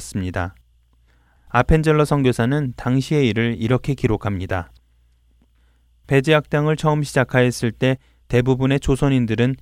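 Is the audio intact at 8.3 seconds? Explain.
Yes, the audio is intact at 8.3 seconds, with no fault to be heard at that point.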